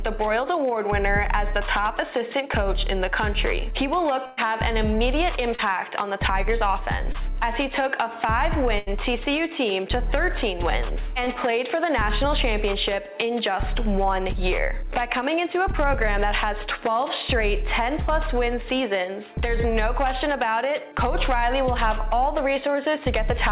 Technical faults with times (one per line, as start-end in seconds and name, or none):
4.26-4.39 burst of packet loss
5.55-5.60 short concealed packet loss
7.12-7.16 short concealed packet loss
8.78-8.88 burst of packet loss
11.24-11.28 short concealed packet loss